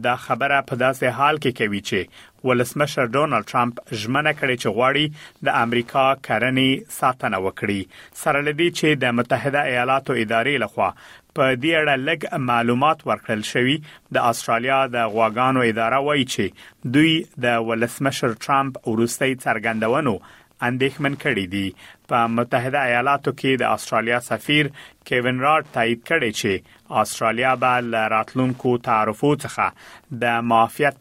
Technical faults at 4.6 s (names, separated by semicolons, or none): Wi-Fi interference